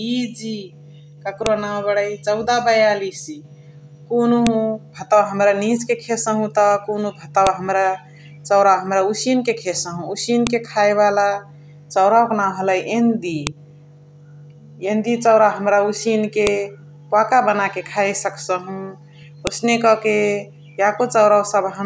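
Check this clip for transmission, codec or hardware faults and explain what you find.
One transmission fault recurs throughout the speech. File header played as audio appears at 1.46, 4.47, 7.47, 10.47, 13.47, 16.47 and 19.47 s, every 3 s. The audio was joined from 3-second WAV pieces whose headers were never stripped. Each header's few dozen bytes are read as sample values. At every seam this produces a sharp, loud click or snap that ignores what the speech is doing, giving a steady, regular ticking across the clip.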